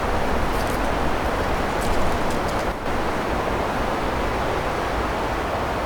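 At 2.72 s the level abruptly drops by about 6 dB, holds there for 0.14 s, then jumps back at 2.86 s. That's likely one channel dropping out: with one side of the stereo pair briefly gone, the mono sum keeps only half of what both channels shared.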